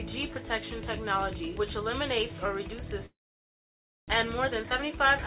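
From 3.06 to 4.12 s the sound breaks off. For about 0.1 s the receiver stretches the last sound before it fades, then roughly 0.94 s of silence or low steady noise follows. When the audio returns, about 600 ms of it never comes back. This is a long network dropout, likely caused by packets failing to arrive for over a second, so the receiver filled the hole with concealment and then resumed further along, with the delay shifted by around 0.4 s.

From 4.44 to 5.0 s the audio sounds hurried, running at about 115% speed with its pitch unchanged. This is a jitter buffer speed-up. The buffer held more than it aims for. To reduce that extra delay, the receiver cut out short pitch-period-length pieces many times in a row, removing around a tenth of a second in total. Throughout the clip, the G.711 A-law call path leaves nothing above 4 kHz.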